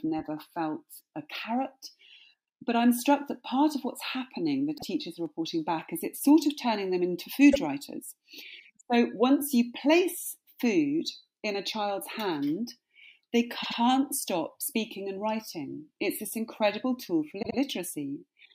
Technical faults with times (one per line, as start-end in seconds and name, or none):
4.77-4.83 repeated frames
7.51-7.57 repeated frames
13.62-13.78 repeated frames
17.41-17.57 repeated frames